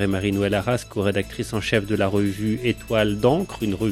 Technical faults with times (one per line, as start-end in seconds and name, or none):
none